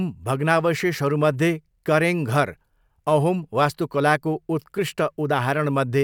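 Speech recording; no technical faults found anywhere in the clip.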